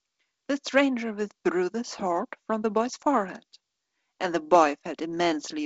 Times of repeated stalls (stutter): none

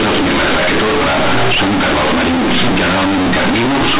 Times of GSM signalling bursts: none

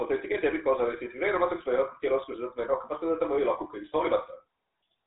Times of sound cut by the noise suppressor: none

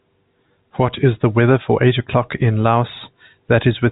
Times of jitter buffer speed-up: none

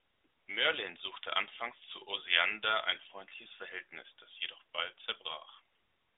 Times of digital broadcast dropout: none

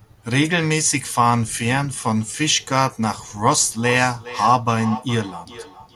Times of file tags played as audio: none

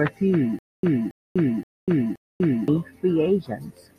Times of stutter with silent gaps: 0.59-2.68

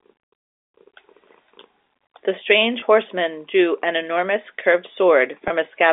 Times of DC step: none

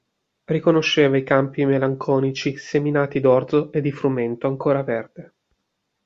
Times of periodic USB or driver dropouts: none

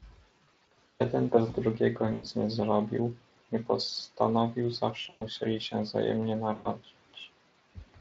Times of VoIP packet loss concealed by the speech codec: 0.43-0.76, 2.13-2.26, 5.01-5.26, 6.55-6.67

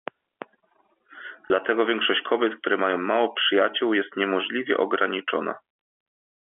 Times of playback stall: none

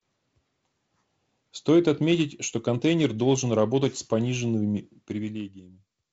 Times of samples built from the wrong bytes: none

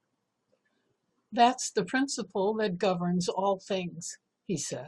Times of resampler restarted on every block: none

